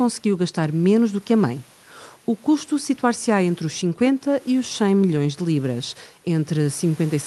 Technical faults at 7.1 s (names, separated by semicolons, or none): none